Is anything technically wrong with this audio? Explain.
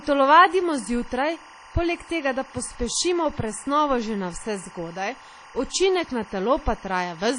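Yes, two faults run through the whole speech recording.

Timecode bleed is present from start to finish. Linear timecode running at 24 frames per second has leaked in from an adjacent track or cable, and its square-wave signal flips between tones near 1 kHz and 2 kHz as the bits change. It sits roughly 25 dB below the speech, so it is quieter than the talker but steady. The result is a constant chirping, warbling buzz behind the voice that never lets up, even in the pauses.

The speech also carries plainly audible coding damage, likely from WMA compression at a low bitrate, which fits something around 32 kbps. A transform codec working with long blocks at that rate spreads its quantisation noise over tens of milliseconds and throws away weak spectral detail. Nothing survives above about 10.1 kHz, so the top end is dull. What remains has a ringing, washy quality, with a hiss that swells and falls along with the speech.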